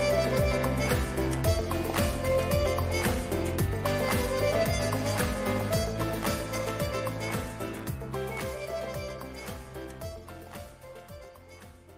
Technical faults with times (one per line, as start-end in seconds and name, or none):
none